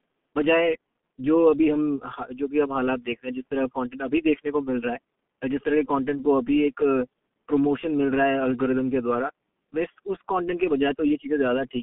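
From start to finish the speech carries the marks of the G.723.1 codec, heavily applied. Nothing reaches above about 3.7 kHz, and the line band runs from 150 Hz to 3.5 kHz, so the voice is muffled and boxed in. The codec rebuilds speech from a slowly updated voice model over long 30 ms frames, which is why consonants smear and vowels take on a hoarse, buzzy grain. The degree of roughness fits a rate near 6.3 kbit/s. That coarse hoarseness, beyond mere band-limiting, sets it apart from a plain narrowband telephone line.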